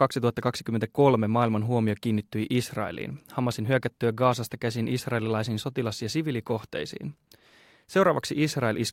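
No faults turn up anywhere in this speech recording, so there's nothing here to flag or explain.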